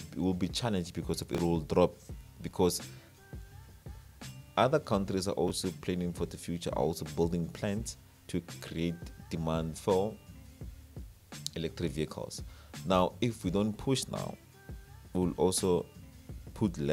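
At 1.35 to 1.39 s and 5.48 to 5.50 s you get chunks out of order: roughly 12 ms blocks land late and play misplaced, giving brief jumbles.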